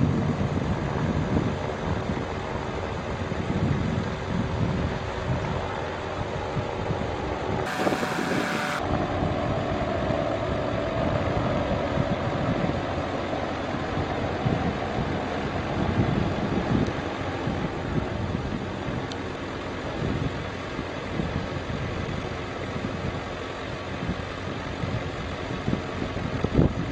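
A section at the wrong speed, likely from a playback or editing clock running at double the intended rate, runs from 7.66 to 8.79 s. The audio there plays twice as fast, jumping about ten semitones higher and sounding hurried before snapping back to its normal pace.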